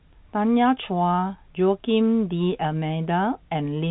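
Nothing stood out on listening to this speech recording, which carries the narrow telephone band of G.711 coding with nothing heard above about 3.9 kHz.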